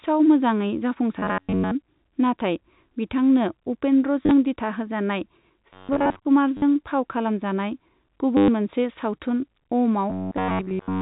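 It's a speech clip over G.711 telephone coding, so nothing above 4 kHz. The robotic sound from repeated short buffers hits at 1.19–1.72 s, 5.73–6.25 s and from 10.1 s to the end. Most of the audio is swapped for a rigid metallic buzz at 93.8 Hz, which fits roughly 10.7 ms buffers being looped, likely because new audio isn't arriving fast enough. Packet loss with the last packet repeated causes quick stutters at 4.23–4.31 s (60 ms lost, scattered), at 6.57–6.62 s just before "फाव खालामजानाय" (50 ms), and at 8.37–8.48 s (110 ms). The amounts fit 10 ms packets.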